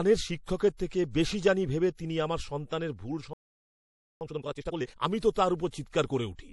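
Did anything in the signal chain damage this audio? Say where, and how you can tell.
Yes. At the codec stage, MP3 compression is plainly audible throughout this speech, and the top end has a watery, swirling quality. That fits a low bitrate, around 48 kbps, likely starving the encoder so it drops treble and weak lines.

Pre-echo, also from the codec, appears at 0.44, 0.58, 0.77, 5.20, 5.30 and 5.68 s, a short hiss running 20 to 58 ms ahead of each attack, for example just before "থেকে বেশি জানি ভেবে" and "তো তাঁর". Quantisation noise spreads across the whole transform block, into the quiet before the onset.

A playback stall cuts the sound dead at 3.33 s, right after "তিনি আমার সন্তানের ভুল", leaving about 0.88 s of silence before it resumes at 4.21 s. The player likely ran dry of buffered data or had its output thread blocked.

Time-compressed catch-up follows from 4.21 to 5.07 s. The audio runs at twice normal speed but keeps its pitch, as the player splices out short segments and cross-fades the joins to work off the backlog the stall left.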